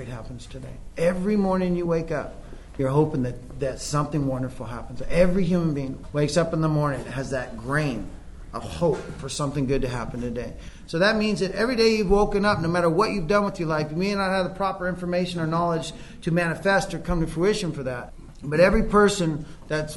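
At 2.78 s, 6.02 s and 13.47 s, compressed frames are skipped. Whole 26.1 ms frames never play. The sound jumps ahead by about 50 ms, then 200 ms, then 30 ms.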